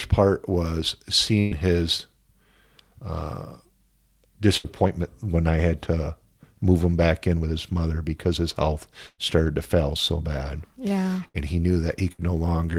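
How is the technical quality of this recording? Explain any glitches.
The speech has five bursts of packet loss, each concealed by the receiver extending the last sound and fading it, with roughly 60 to 120 ms of audio dropped.

At 1.39–1.54 s, after "part was", the held fill lasts about 115 ms and about 120 ms of speech is skipped. At 4.57–4.67 s, just before "when I had to", the fill lasts about 70 ms. At 9.07–9.21 s, between "mother because his health" and "started to fail so", the fill lasts about 112 ms and ends in a short stretch of silence. At 11.28–11.37 s and 12.12–12.21 s, the fill lasts about 60 ms each time. In every case the audio resumes past the lost section, so those syllables sound clipped.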